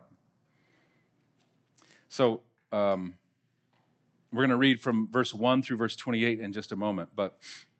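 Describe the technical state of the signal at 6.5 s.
At 6.5 s the speech is intact, carrying only the ordinary coding character of the Opus call path, with its top end limited to about 8 kHz.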